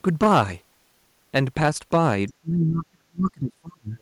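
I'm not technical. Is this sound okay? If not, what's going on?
No, it has a few problems. The first runs the whole way through: hard clipping. The recording was pushed louder than the equipment could handle, so the loudest moments got their tops chopped off flat. That adds a gritty crackle on the peaks of the speech. Only a small share of the sound actually hits the ceiling, so it's more a roughness on the loud bits than a constant fuzz.

Right around 2.3 seconds, for a split second, there's a very faint scrap of a second voice: the other side's voice leaking through. The likely cause is that this person's device was playing the other caller on a speaker, the mic picked it up, and the echo remover didn't fully clean it out. It's quiet enough that you could easily miss it, but it's there.

Straight after, from about 2.33 to 3.97 seconds, the speech keeps dipping and at its worst nearly vanishes, adding up to roughly a second and a half of damage. 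That's speech suppressed in double talk. Both people were likely talking at once, and the echo remover couldn't tell this speaker apart from the other side's voice, so it turned everything down together.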